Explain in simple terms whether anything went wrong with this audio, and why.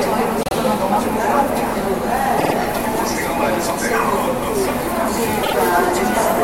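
Three stutters are audible, caused by repeated frames: a short chunk of the compressed audio was stored or sent more than once, so the player plays the same slice again. Each time, a block of about 52 ms repeats. At 0.43 to 0.55 s it plays twice extra, at 2.37 to 2.54 s three times extra, and at 5.42 to 5.54 s twice extra. Each repeat makes the sound slightly longer, by roughly 0.1 to 0.16 s.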